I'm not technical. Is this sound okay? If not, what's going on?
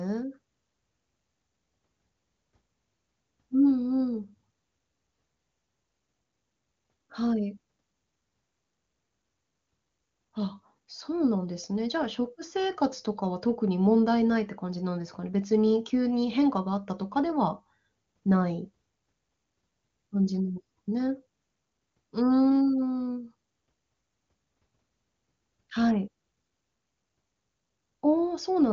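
Yes, it's fine. There's nothing wrong to hear, and the slightly trimmed top end, with nothing above about 7.3 kHz, is just how an ordinary HD Voice phone call (the AMR wideband codec) sounds.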